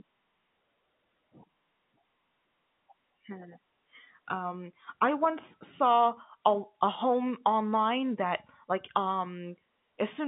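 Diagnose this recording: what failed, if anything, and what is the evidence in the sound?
Nothing stood out on listening: the speech sits within the narrow telephone band of G.711 coding, roughly 150 Hz to 3.6 kHz with nothing above 3.8 kHz, and no failure of any stage can be heard.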